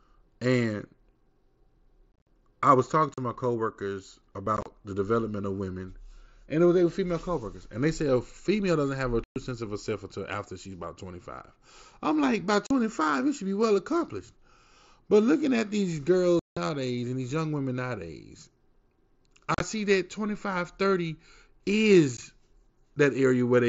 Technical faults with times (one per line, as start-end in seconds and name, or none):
2.12-2.27 unconcealed Bluetooth headset packet loss
3.14-3.18 unconcealed Bluetooth headset packet loss
4.46 dropped buffer (overrun)
4.57-4.66 unconcealed Bluetooth headset packet loss
9.24-9.36 unconcealed Bluetooth headset packet loss
12.67-12.71 unconcealed Bluetooth headset packet loss
16.39-16.57 unconcealed Bluetooth headset packet loss
19.54-19.60 unconcealed Bluetooth headset packet loss
22.17 unconcealed Bluetooth headset packet loss